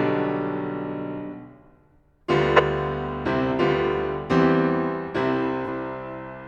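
A short music clip with two frame faults. At 2.56 to 2.60 s there's a loud glitch, a corrupt frame decoded: flipped bits got played as-is, throwing energy to wrong frequencies for roughly one frame. Then around 5.65 to 5.68 s you get a brief concealed flaw instead, a corrupt frame concealed, where the decoder caught the damage and papered over what sounds like a single frame.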